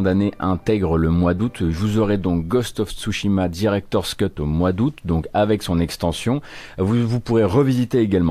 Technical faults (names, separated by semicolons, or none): none